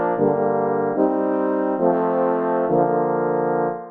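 No technical faults are audible.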